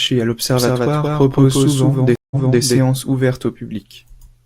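From about 0.57 s to 2.78 s the speech has a doubled audio track: a second full-band copy trails roughly a fifth of a second behind, at about the same level, with no room colour, and cuts in and out abruptly. That's likely a slower second capture path mixed in alongside the first.

Then at 2.16 s there's a stream reconnect. The audio drops out for about 156 ms while the connection breaks and a fresh decoder starts. When it comes back it has jumped back 299 ms, so you hear a stretch repeated, settling by about 2.61 s.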